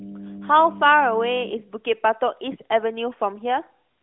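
From 0 to 1.5 s, mains hum runs under the speech: a steady 50 Hz tone, roughly 10 dB below the speech, leaking in from the power line through a ground loop or nearby transformer. A spectrogram shows a flat line at 50 Hz that stops abruptly at 1.5 s.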